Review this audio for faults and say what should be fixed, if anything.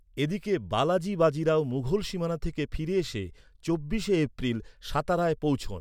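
Nothing stood out on listening to this speech, so there is nothing here that needs fixing.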